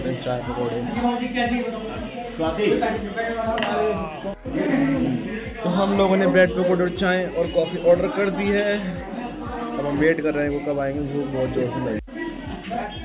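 No technical faults can be heard anywhere in this audio.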